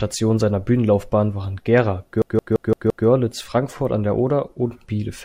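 From 2.22 to 3.07 s, a system hang loop replays one frozen 0.17 s buffer five times: a 5.9 Hz stutter, seen as identical repeating waveform blocks.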